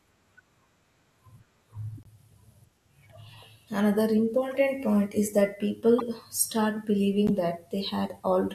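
Four short bursts in this speech come from a corrupt frame decoded: a damaged compressed frame got played anyway, so the decoder sprayed energy into the wrong frequencies for a few frames each time. You get a quiet burst at 1.98–2.07 s, another burst at 4.51–4.57 s right before "point is that", a louder burst at 5.98–6.02 s just after "point is that", and the harshest at 7.27–7.30 s, climbing from about -35 to about -10 dBFS.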